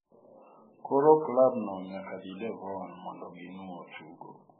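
Throughout the speech, nothing is heard above 4.2 kHz, and the sound turns watery and swirly. Likely heavy MP3 compression, fitting a bitrate near 8 kbps.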